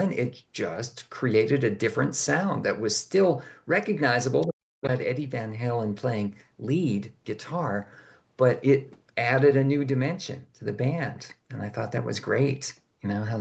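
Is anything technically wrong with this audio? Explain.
Yes. From 4.41 to 4.47 s a faint scrap of a second voice sits well below the talker. This is the other side's voice leaking through, likely because the echo canceller left some of the loudspeaker playback in the microphone signal.

Right after, from 4.47 to 4.84 s, the talker's speech sinks sharply, by about 40 dB at its deepest, for roughly 0.4 s. This is speech suppressed in double talk: with both sides talking, the canceller likely could not tell the talker from the echo and turned everything down.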